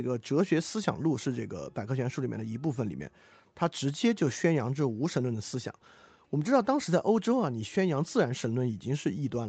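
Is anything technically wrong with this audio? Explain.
No, nothing here is technically wrong; the speech has simply been through an ordinary call chain, with nothing above about 8 kHz, which fits a wideband call codec such as Opus at a moderate bitrate.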